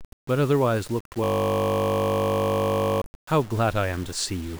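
A speech recording runs its whole length with a coarse, grainy distortion that rises and falls with the voice, most likely low bit depth without dither, consistent with the signal being rounded to about 6 bits. The error sits only roughly 20 dB below the speech and tracks it, so quiet syllables and decays turn gritty or sputter between steps, unlike dithered noise, which would stay as a steady, even hiss independent of the sound. From 1.24 s to 3.02 s the speech is replaced by a system hang loop: a single 20 ms slice of audio repeats exactly, over and over, producing a steady buzz at 50 Hz. Because each repeat is an identical copy of the same tiny piece of buffer, it reads as a fixed-pitch drone rather than the irregular skips and gaps of a dropout or the shifting fragments of a packet-loss concealer.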